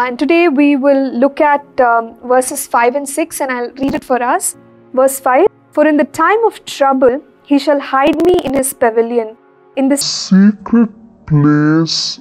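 Two bursts of processor overload crackle break up the audio, from 3.83 to 4.10 s and again from 8.07 to 8.59 s. Each burst is a gritty tearing laid over the sound. Tiny slices of audio go missing, one after another, with hard edges between them. The gaps are each a few milliseconds long, which points to a small buffer that the processor failed to fill in time. The first burst sounds like about fifteen missed deadlines, and the longer second one like about thirty. Compressed frames are skipped at 5.46 s and again at 7.08 s. Each time the audio jumps forward with a short smeared blip, not a sharp click. The first jump loses about a tenth of a second, and the second about half that. Both fit whole frames of 26.1 ms going missing, either dropped from the file or rejected by the decoder as damaged. Overlapping frames soften the join. From 10.01 s to the end, the section is at the wrong speed. 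It plays at 0.54 times the proper rate, so it drags slowly. The pitch falls by about ten semitones at the same moment, because speed and pitch move together. The likely cause is that this part was played or edited against the wrong clock.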